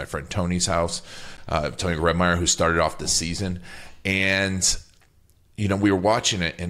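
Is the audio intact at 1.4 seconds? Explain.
No. A block of digital silence hits at 1.37 s. About 12 ms of samples drop to zero with hard edges, giving a brief tick.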